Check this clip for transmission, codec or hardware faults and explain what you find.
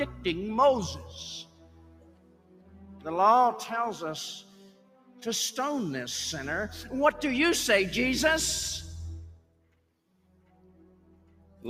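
A speech-tuned noise suppressor has been left running on non-speech material, and there is one clear fault, plus a set of moments where it bites hardest.

Noise suppressor applied to music or sounds: throughout the clip, the processor treats steady, sustained content and decaying tails as background noise and pulls them down. The level swings by roughly 10 dB, so the sound pumps and thins while sharp onsets mostly get through. Unlike a compressor or automatic gain control, which react to loudness, this reacts to how steady the sound is.

Sound cut by the noise suppressor: the deepest cuts come at 1.01 to 1.17 s (about 5 dB), then 1.43 to 3.06 s, 4.41 to 5.24 s, 9.36 to 9.86 s and 10.15 to 11.64 s (each about 11 dB). Sustained portions and decays sag or end early while attacks survive. These are level drops of the held parts, not gaps: nothing goes silent, which separates them from packet-loss dropouts.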